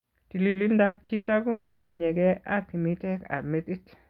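From 0.49 to 1.30 s the speech turns choppy and robotic: that's repeated packet loss, with four separate holes, the longest about 120 ms, each patched by stretching the previous sound. Roughly 360 ms, close to half that stretch, is filler rather than real audio.

Then from 1.51 to 2.02 s the speech is replaced by a sustained smeared continuation that never drops to silence, about 480 ms of it, before the voice picks up again with that part gone. It's likely a long network dropout.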